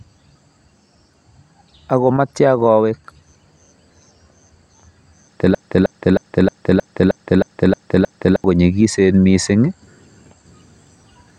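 Speech, and there's a broken-record loop from 5.55 to 8.44 s: one 0.31 s fragment plays back to back nine times, identical each pass. Likely the player or stream stalled and kept resending its last chunk, so the real audio for that stretch is gone.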